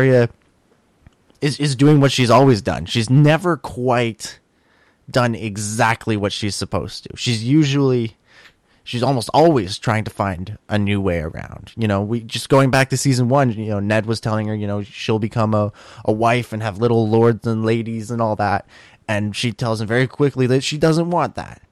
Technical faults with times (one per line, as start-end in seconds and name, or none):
0.00-21.71 hard clipping